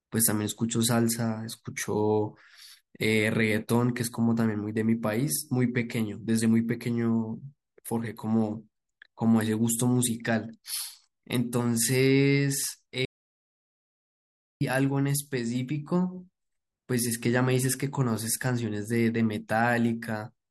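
At 13.05 s the speech cuts off abruptly into an audio dropout to silence. The gap lasts about 1.56 s, until 14.61 s. It is dead digital silence, with no room tone. The input was likely lost while recording continued. Speech resumes mid-flow.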